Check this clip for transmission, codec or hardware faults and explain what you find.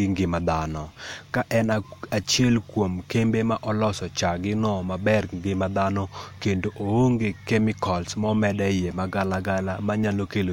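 No transmission, codec or hardware faults can be heard anywhere in this speech recording.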